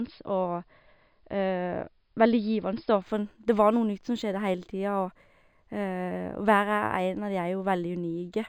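From 3.02 s to the end of the clip, the speech shows imaging from linear upsampling. The sound fits a conversion from about 11 kHz up to 48 kHz done by straight-line interpolation, a poor anti-imaging filter. The top of the original band is dulled, and a mirrored copy of the spectrum appears between roughly 5.5 kHz and 11 kHz, around 35 dB below the signal, heard as a faint metallic shimmer on sibilants.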